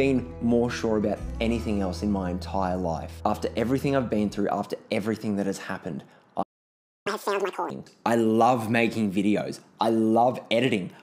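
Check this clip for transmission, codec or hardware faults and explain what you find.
Two related faults show up, back to back. There's a playback stall from 6.42 to 7.07 s: the sound cuts out mid-flow for about 0.63 s, most likely because the player ran dry or its thread got blocked. Then comes a catch-up at higher speed from 7.07 to 7.70 s, where the backlog plays at 2x, pushing pitch up by nearly an octave before settling back to normal.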